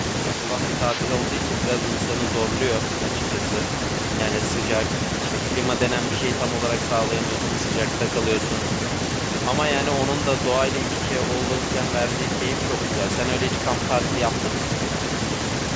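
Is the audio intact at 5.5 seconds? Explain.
Yes, the speech at 5.5 s is intact, with nothing disrupting it beyond the ordinary call microphone processing it has passed through.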